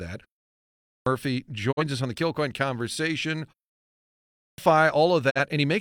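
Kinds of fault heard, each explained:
Clipped start after a pause: after a silence of about 0.46 s, the speech resumes abruptly at 0.63 s with its opening sounds missing, roughly 0.43 s swallowed, and again at 4.11 s after a 0.66 s pause, losing about 0.47 s. The output device sleeps in silence and wakes too slowly.
Digital broadcast dropout: the sound fades out over about 20 ms and leaves a short hole near 1.71 s and again near 5.29 s, each losing roughly 43 ms, which fits one missing frame. The receiver muted when frames failed to arrive intact, and what they carried is gone.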